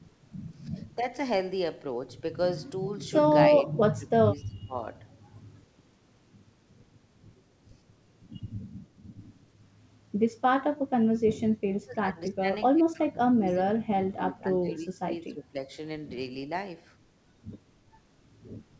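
At 3.58 to 4.75 s, then 11.72 to 12.48, 12.72 to 13.74 and 13.90 to 15.57 s, the speech dips by roughly 20 to 30 dB and thins out in patches, each lasting roughly 0.7 to 1.5 s. This is speech suppressed in double talk, likely an echo canceller pulling down the near talker while the far end also spoke. The G.722 path stays band-limited to 8 kHz.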